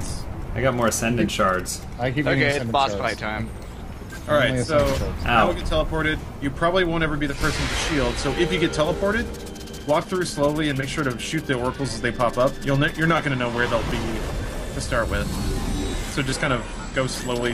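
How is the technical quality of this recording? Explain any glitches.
No technical faults are audible.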